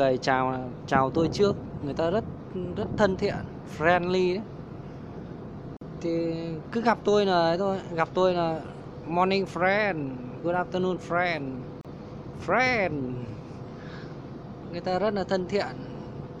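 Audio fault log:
5.77–5.81 s and 11.81–11.85 s, gap at a join of encoded pieces: silences of about 45 ms and 34 ms open in otherwise continuous sound, roughly 6 s apart, where separately encoded segments were butted together with their start-up delay and last-frame padding left untrimmed. Unlike a dropout, nothing is missing, because the sound resumes exactly where it stopped. The edges are smeared by the codec, and the fixed spacing matches the segment length.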